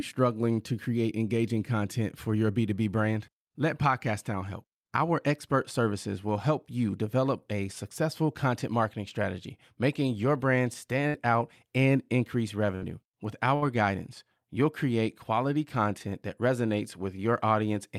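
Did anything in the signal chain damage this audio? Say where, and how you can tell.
Yes. At 11.07–11.17 s, 12.75–12.98 s and 13.55–13.68 s the speech briefly freezes, the last sound held and fading, then resumes with about 40 ms gone. It's a burst of packet loss in the network; the receiver stretched the last sound over roughly 60 ms.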